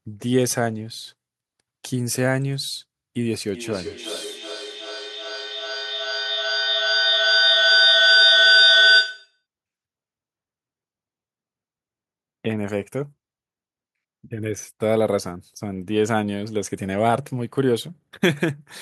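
Two devices on the same call create a gain loop, producing feedback howl in the speech from 3.54 to 9.43 s: a tone near 1.5 kHz, with the loop repeating roughly every 400 ms, peaking about 6 dB above the voice.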